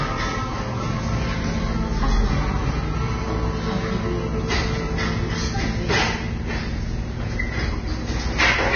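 Everyday sound with heavy Vorbis compression damage throughout: nothing above 6.5 kHz, and a hissy, grainy treble that likely comes from a very low bitrate near 19 kbps.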